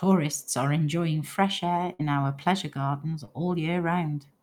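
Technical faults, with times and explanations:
1.93 to 2.01 s, burst of packet loss: Right after "are enjoying fresh air" and before "our pleasure gardens", a run of audio went missing. The receiver bridged about 58 ms by stretching the last sound and letting it fade, giving a held buzz or fading hiss that dies away, then jumped ahead, so roughly 60 ms of speech is simply gone. Unlike a short concealed loss, this gap is long enough to hear as a stall followed by a skip, not a quick smear.
3.25 to 3.29 s, short concealed packet loss: Shortly after "our pleasure gardens", a few hundredths of a second failed to arrive in time. The decoder patched about 22 ms by continuing the preceding sound, following its pitch where voiced or as shaped noise where not, then blended back into the real audio, with around 20 ms of content lost. What separates it from a burst is brevity: it reads as a fleeting wobble or smear with no audible fade or jump.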